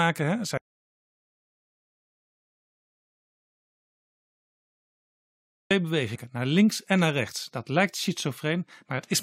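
At 0.58 s the speech just stops dead, and nothing comes back until 5.71 s. That's an audio dropout to silence, and a long one: about 5.1 s of the recording is simply gone. The gap is pure silence, with no room tone or hiss underneath, so it sounds like the input vanished rather than the talker pausing. Most likely the source dropped out, through a disconnected device, a failed link or a mute, while the recorder kept writing silence.

Shortly after the speech resumes there's a quick glitch from 6.14 to 6.16 s, only about 20 ms long. That's damaged data in a compressed stream. A stretch of the encoded data came through wrong, so the decoder couldn't make sense of those frames, lost its place and had to hunt for the next valid frame header to resync. What you hear is a short glitch cutting across the speech instead of the clean sound that should be there.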